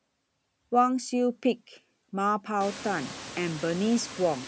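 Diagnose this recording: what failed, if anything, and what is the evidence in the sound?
The fault is in call processing: noise suppressor artifacts throughout the speech. The suppressor pulls steady background down by about 11 dB between phrases and lets it back under speech. The room noise rises by about 24 dB near 2.5 s, to about 17 dB below the speech, and the suppressor keeps sinking and swelling it around the words.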